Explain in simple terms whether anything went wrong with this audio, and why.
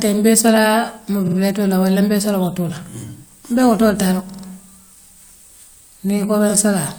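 Three short stutters come from repeated frames, where a small piece of the compressed audio was played again. From 1.27 to 1.36 s, just before "la wala mbee soola", a 46 ms chunk repeats twice. From 4.29 to 4.42 s, after "mbe wotool taa la", a 46 ms chunk repeats three times. From 6.49 to 6.51 s, a 23 ms chunk repeats once. Each repeat jumps back in the sound, which causes the stutter, and together the repeats make the clip about a quarter of a second longer.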